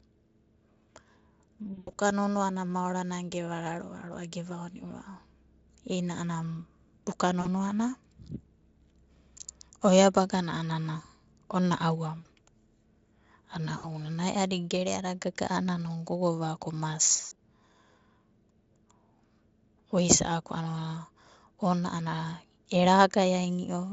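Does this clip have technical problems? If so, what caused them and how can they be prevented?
Yes, there's VoIP packet loss concealed by the speech codec, at 1.73–1.96 s (just before "nonoana maorana"), 7.41–7.48 s, 12.19–12.27 s, 13.77–13.86 s and 17.11–17.36 s. During each dropout the decoder keeps extrapolating from the last pitch and filter while fading the level, so you hear a buzzy or noisy, fading smear. The first and last events are longer, with gaps scattered over about 200 ms and 240 ms. The signal stays weak for a moment after the packets resume. To prevent it, stabilise the network path and add a jitter buffer or forward error correction.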